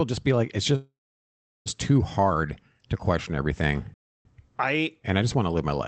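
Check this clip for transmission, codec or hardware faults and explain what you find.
Two dropouts show up, both interruptions rather than codec damage. The call-path band-limiting up to about 8 kHz is audible throughout.

From 0.75 to 1.68 s there's a call audio freeze. The speech fades into a short decaying fill, then goes silent for about 0.72 s before resuming exactly where it stopped, so nothing is lost. The likely cause is delayed packets draining the jitter buffer.

From 3.94 to 4.25 s there's a playback stall. The output drops to silence for about 0.31 s mid-flow, likely because the player ran out of data or its thread got blocked.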